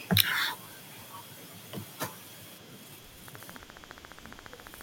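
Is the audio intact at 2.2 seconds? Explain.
Yes, the speech at 2.2 seconds is intact, with no audible fault at that moment.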